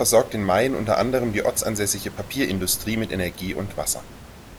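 No technical faults can be heard in the speech, and the only background present is the room's own ambient noise, sitting about 18 dB below the speech.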